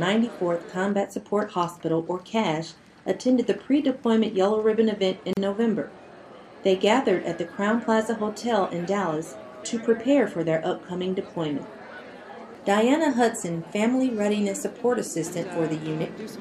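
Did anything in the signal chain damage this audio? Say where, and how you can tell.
Yes. The damage happened at the codec stage. The audio was encoded in separate pieces that were then spliced together without trimming each piece's encoder delay and final-frame padding. That leaves a gap at a join of encoded pieces: from 5.33 to 5.37 s, about 37 ms of silence cuts into continuous sound. Both edges are smeared by the codec. Afterwards the sound resumes exactly where it stopped, so nothing is missing, only the inserted silence.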